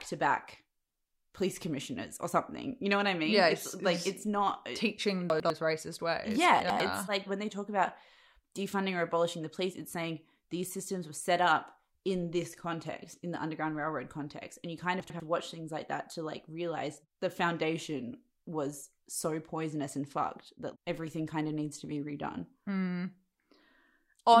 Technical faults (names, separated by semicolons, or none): chunks out of order